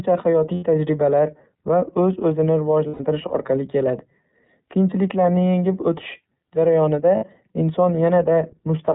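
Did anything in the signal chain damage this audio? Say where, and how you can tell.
Yes. iLBC codec damage runs through the whole clip, at the codec stage. The speech has nothing above 4 kHz and sounds plainly rough and synthetic, because each 30 ms frame's excitation is coded on its own at a low rate. That fits iLBC's 13.33 kbps mode.

Lost iLBC frames occur at the network stage at 0.54–0.63 s, before "tajribalar va"; at 2.88–3.00 s, before "orqali keladi"; and at 7.17–7.24 s. The decoder filled each gap of 90, 120 and 60 ms with a held, buzzy repeated pitch cycle, which points to three, four and two frames lost.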